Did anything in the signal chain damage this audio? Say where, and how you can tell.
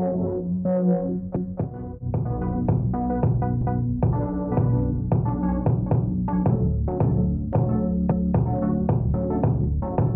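Yes. The chunking stage, where audio is processed or buffered in blocks, is overlapping its chunks. Each 2-second chunk begins before the previous one has finished, so about 250 ms at every join plays twice. This is audible as a stutter at the seam at 1.36–1.62 s, 3.61–3.87 s, 5.86–6.12 s and 8.11–8.37 s. The steady 2.25-second spacing matches a 2-second chunk plus the repeated 250 ms.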